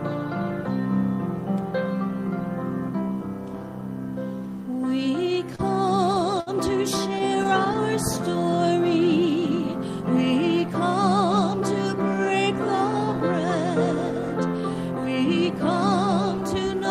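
Around 5.55 to 5.62 s and again at 6.40 to 6.50 s there's a short stall from a late packet: the buffer ran dry, so the last bit of sound gets held about 34 ms, then 62 ms, with nothing lost. Between 7.19 and 7.78 s come scattered short gaps, around four tiny patched holes, each roughly 10 ms or less, heard as quick ticks and smears.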